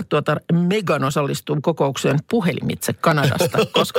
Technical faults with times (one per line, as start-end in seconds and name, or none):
0.11-3.11 clock drift buffer slips